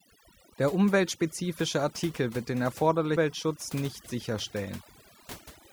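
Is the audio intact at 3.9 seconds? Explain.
No. Overdone noise removal affects 3.9 seconds, as it does the whole speech clip. The noise reduction was set so strong that frequency bands near its noise estimate are cut deeply, taking quiet parts of the voice with them, leaving the speech over near-silence with twinkling specks.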